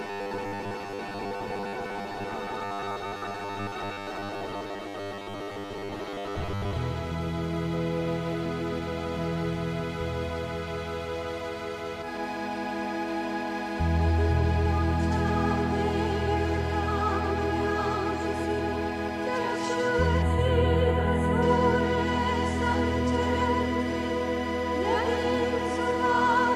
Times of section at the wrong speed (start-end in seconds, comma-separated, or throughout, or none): none